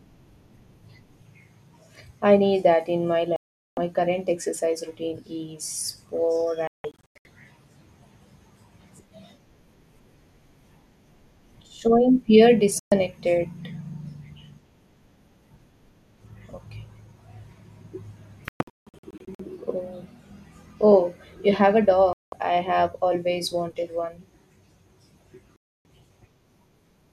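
The speech cuts to dead silence six times: from 3.36 to 3.78 s, between "need that in my" and "current exercise routine"; from 6.67 to 7.26 s as several short holes, the longest about 0.17 s; briefly from 12.79 to 12.92 s; from 18.48 to 19.40 s, again broken into scattered gaps; from 22.13 to 22.33 s, between "oh you have a" and "I have always wanted"; and from 25.56 to 25.86 s. This is digital broadcast dropout. The receiver muted while frames were lost or failed their checks, so whatever was sent during each gap is gone, not just quieter.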